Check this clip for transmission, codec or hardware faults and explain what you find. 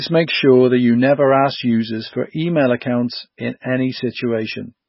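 One codec fault runs through the whole speech clip. Throughout, heavy MP3 compression is likely: nothing remains above 5.6 kHz, and starved weak frequency lines flicker on and off, giving a watery swirl that a plain low-pass filter wouldn't produce, consistent with about 16 kbps.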